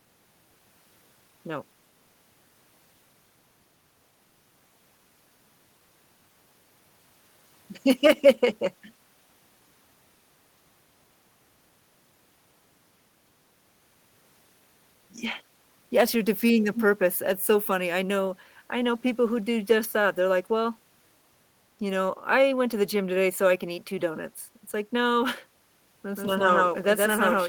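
A speech recording with two faults near the end. At 16.75 to 16.81 s a brief echo leak appears: a short scrap of the voice returns 255 ms late, only a few dB below the speech. Its fragmentary character sets it apart from a clean duplicate. The likely cause is a loudspeaker at the far end whose echo canceller failed to suppress everything its microphone picked up, so that residue was sent back into the call. From 26.16 s to the end, the audio becomes a doubled audio track: a second full-band copy roughly as loud as the original trails it by around 150 ms. It starts abruptly and carries no decay or room colour, so it sounds like two identical signals slightly out of step rather than reverberation or a leaked echo. This likely comes from the same signal being captured again through a slower path and mixed in with the first.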